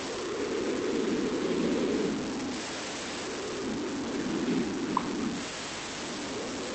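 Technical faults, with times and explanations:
Throughout, low bit depth without dither: grainy distortion follows the speech, with error roughly as loud as the signal. Quiet stretches sputter or vanish, likely from truncating samples to very few levels, which fits about 4 bits, heard through the Opus call path.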